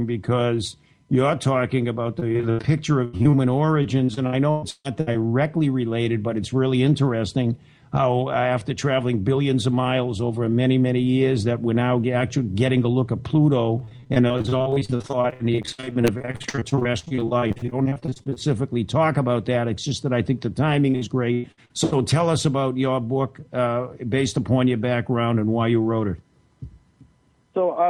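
Repeated packet loss (robotic sound) at 2.19 to 2.61 s, 3.05 to 3.35 s, 3.83 to 5.16 s, 13.78 to 18.38 s and 20.90 to 21.71 s: a rapid train of short holes, each patched by stretching the last sound, chops the audio, with over a third of each stretch filled in. Unlike a single dropout, the gaps keep recurring, and in the longest stretch from 13.78 to 18.38 s they arrive densely.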